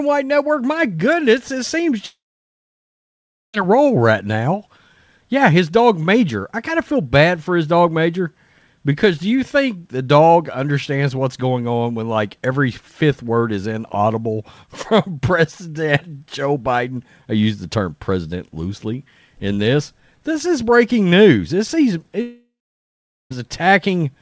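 At 2.06 s the stream likely suffered a long network dropout: packets stopped arriving for about 1.48 s, and the receiver stretched the last sound into a short fading buzz before falling to silence for roughly 1.36 s until 3.55 s. The same happens from 22.21 to 23.32 s, with about 1.1 s lost and 0.8 s of silence. The speech resumes each time with the missing portion gone, over a call path whose sound stops at 8 kHz.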